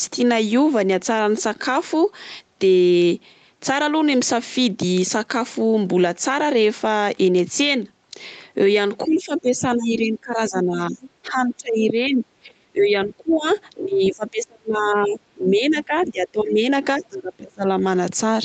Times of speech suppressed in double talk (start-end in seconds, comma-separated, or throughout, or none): 9.04-11.02, 11.28-13.45, 13.74-16.64, 16.98-17.65